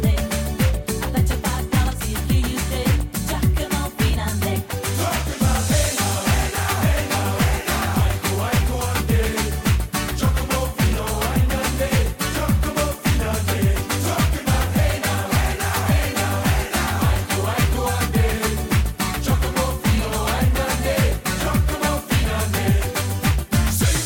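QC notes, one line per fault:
15.67 s dropped samples: one sharp click, likely from well under a millisecond of signal going missing, so the waveform jumps abruptly to a later value.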